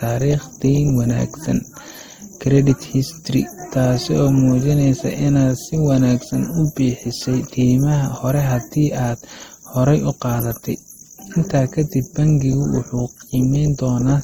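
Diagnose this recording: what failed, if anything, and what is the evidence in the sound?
Across the whole speech clip the sound carries two layers of coding damage at once: a smeared, watery texture alongside a grainier, swishy MP3-style roughness, with no content above about 20.1 kHz. This is a codec-stage fault, most likely transcoding between lossy codecs, consistent with a low-rate Opus encode near 24 kbit/s re-encoded to MP3 near 64 kbit/s. The MP3 stage spends bits reproducing the Opus artefacts and then adds its own.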